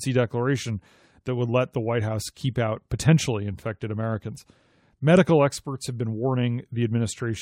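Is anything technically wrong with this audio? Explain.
No, nothing technically wrong can be heard in this speech recording. The audio gives no sign of any fault at any point.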